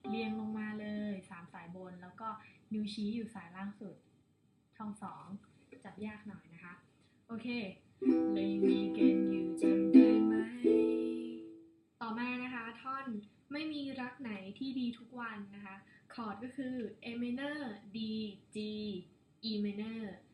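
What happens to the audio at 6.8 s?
Nothing goes wrong at 6.8 s; the audio plays through that moment intact, with no dropout, click or other audible fault.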